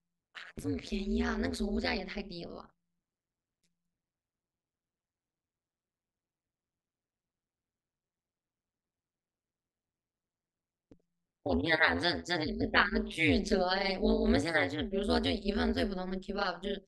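From start to finish, the speech carries an overlap-add ripple. The audio was split into windowed frames and summed back together. The overlaps did not add up to a steady gain. So the level swings once per frame, at around 150 times a second. The swing is deep, about 60 dB from peak to trough. At that rate it stops sounding like a tremolo. It becomes a harsh, buzzy, robotic roughness laid over the whole voice.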